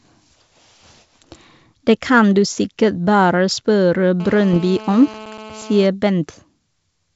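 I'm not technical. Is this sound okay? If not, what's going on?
No. From 4.20 to 5.86 s there is GSM phone buzz. A mobile phone on a call nearby was sending radio pulses about 217 times a second, and the audio circuitry picked those pulses up and turned them into sound. You hear a harsh, raspy buzz underneath the speech that stays steady for that stretch and has nothing to do with what is being said. It is quieter than the speech itself.

Inside that same stretch, from 4.53 to 4.58 s, there are bit errors on an ADPCM link. A small number of the digital bits carrying the audio were flipped in transit. This kind of coding predicts each moment of sound from the last, so one wrong bit throws the decoder off briefly until it recovers. The result is a short pop with a rough, crackly burst and a quick change in loudness, layered on top of the buzz.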